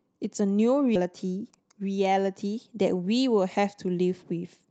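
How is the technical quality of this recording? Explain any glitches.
The recording has two timing glitches on a call path whose Opus coding keeps audio up to about 8 kHz.

Skip ahead, 0.95 to 1.06 s: a stretch of speech, roughly 400 ms, was dropped while later packets were already queued. Playback leaps forward with no gap, so the speech on either side of the jump butts together abruptly and a piece is simply missing.

Jitter buffer speed-up, 1.53 to 2.12 s: with more audio queued than it aimed for, the receiver trimmed many short pitch-period slices, around 50 ms in total, to reduce delay. The speech runs about 9% fast at unchanged pitch and sounds rushed.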